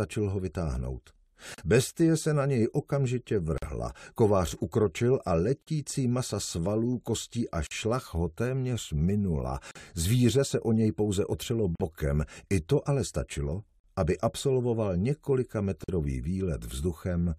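Gaps at joins of encoded pieces open at 1.54, 3.58, 5.62, 7.67, 9.71, 11.75, 13.80 and 15.84 s, every 2.0 s. Each is a 43 ms dropout (the first 37 ms) where untrimmed encoder delay and padding were left in, showing as a flat waveform and a blank spectrogram column with smeared edges.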